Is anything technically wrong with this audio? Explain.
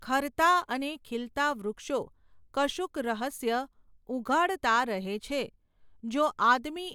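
No, nothing technically wrong can be heard in this speech recording.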